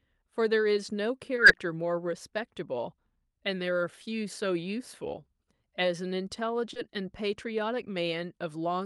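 Short concealed packet loss appears twice in this speech, from 1.35 to 1.39 s and again from 6.73 to 6.77 s. Each time about 20 ms of audio failed to arrive at the decoder in time, so the receiver invented a stand-in by extending the preceding sound, following its pitch where voiced or substituting shaped noise otherwise, before crossfading into the real signal. The result is a momentary smear or wobble, and a brief consonant can drop out.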